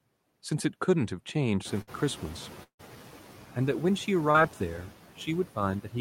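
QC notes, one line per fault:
Throughout, noise suppressor artifacts: the suppressor is pulling down whatever bands it reads as steady noise, frame by frame, and only by about 5 dB, so the background dips in the gaps and swells back under the speech.
1.64 to 2.96 s, noise suppressor catching up: the room noise jumps by about 20 dB around a second and a half in, ending up only about 18 dB below the speech. The suppressor's noise estimate hasn't caught up, so the louder background comes through with little reduction at first. It then settles back down over roughly 1.3 s as the estimate adapts, finishing at about the same 5 dB cut as before.
1.81 to 1.89 s, burst of packet loss: about 60 ms of audio never got played. The receiver papered over it by carrying on the last bit of sound and letting it fade, so you hear a short held buzz or hiss instead of real speech. When the audio picks up again it has skipped ahead, and that 60 ms stretch is simply gone. 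It lands right inside the noisy, unsettled section.
2.63 to 2.81 s, long network dropout: the sound smears into a fading buzz or hiss for a bit over a tenth of a second, then drops to near silence for about 90 ms before the speech comes back. When it resumes, roughly 160 ms of the original is missing. The likely cause is an extended gap where nothing arrived at all, with the receiver stretching the last sound until it gave up.
4.31 to 4.36 s, short concealed packet loss: about 40 ms didn't reach the decoder in time, and the receiver filled around 34 ms of it by extending the preceding sound, then blending back into the real signal. It comes across as a brief smear or wobble, just a quick blip in the flow. A short consonant sitting in that spot could easily vanish without any obvious click or gap.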